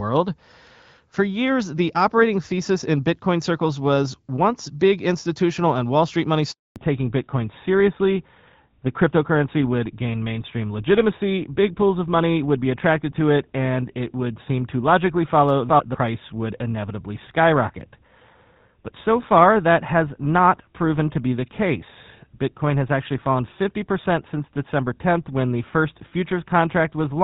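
At 6.52 s the speech cuts out in a handover gap: the call switched networks and no speech frames arrived for 240 ms, until 6.76 s. The waveform falls to flat silence within a few tens of milliseconds, and the spectrogram shows a blank vertical strip where the lost audio would be.

From 6.76 s to the end, the call makes a fallback to narrowband. Before the gap the sound has the clear HD Voice character that fits AMR wideband at 12.65 kbit/s. Afterwards nothing above 4 kHz remains, which points to GSM full rate. The voice turns duller and rougher, and the spectrogram shows a hard ceiling at 4 kHz, with the upper band empty from the gap onward.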